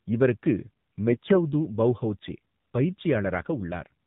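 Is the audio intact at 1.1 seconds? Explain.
No. AMR bit errors run from 1.08 to 1.39 s. On a weak mobile link, a few percent of the less protected bits in each AMR frame arrived flipped while the checksum on the critical bits still passed, so the decoder accepted them. The excitation pulses land in wrong positions and the fine pitch, gain and spectral values drift. The voice keeps roughly its pitch and level, but for that third of a second it turns hoarse, scratchy and gargly.

Underneath, the AMR narrowband mobile codec applies here as everywhere in the clip. At 7.4 kbps, AMR-NB rebuilds the voice from a vocal-tract model fed by a handful of pulses per 5 ms subframe. With so few bits, the voice sounds buzzy and synthetic. Because the codec samples at 8 kHz, nothing above 4 kHz survives, which leaves a muffled, telephone-band sound at 1.1 s.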